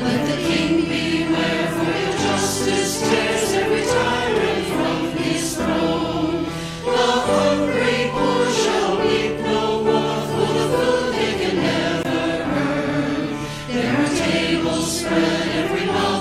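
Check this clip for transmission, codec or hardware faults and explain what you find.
One fault is present: a gap between stream segments at 12.03 s. The sound stops abruptly, leaving a hole of about 17 ms with hard edges, then resumes. It falls on a boundary that fits 6-second stream segments. The timestamps of two adjacent segments do not meet. The player fills the missing span with silence. No audio is lost. The following material simply starts 17 ms later. It occurs only once here.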